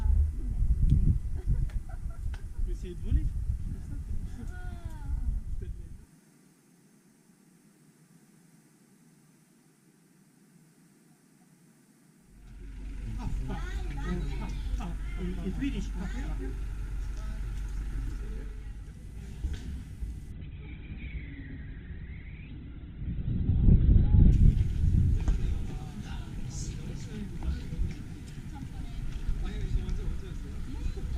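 Adaptive stream at a lower bitrate, 20.32 to 24.32 s: the stream abruptly switches to a much leaner encoding, nothing above 4.2 kHz, consistent with roughly 12 kbit/s Opus, then recovers without a gap.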